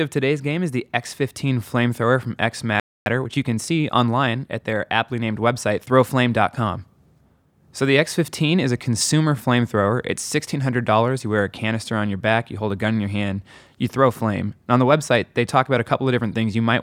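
At 2.80 s the player likely ran short of buffered data, so a playback stall silences the speech for about 0.26 s before it resumes at 3.06 s. From 3.06 s to 4.80 s, time-compressed catch-up trims and cross-fades small slices to clear the backlog. The speech runs about 1.15 times fast at unchanged pitch, starting with "aptly named website".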